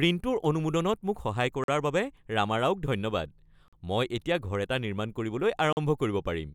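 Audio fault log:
1.64–1.68 s, 3.68–3.73 s, 5.73–5.77 s: gap between chunks, 44 ms silences every 2.0 s where the speech resumes intact, unlike a dropout that deletes sound.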